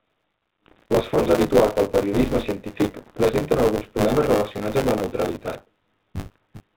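Buffer tearing runs through the whole speech clip. Writer and reader have slipped, so about a third of each period replays audio some 20 ms old. It makes a robotic 100 Hz buzz during speech.

Bit errors on an ADPCM link strike at 0.66 to 0.86 s, 2.99 to 3.23 s and 6.20 to 6.36 s. The middle burst falls after "habituals del periodisme científic" and before "presenten alguns problemes relacionats". Error rates near one percent upset the decoder's step size and predictor. Each burst gives pops, rough grit and brief level jumps. The 32 kbit/s G.726 path itself caps the band at 4 kHz.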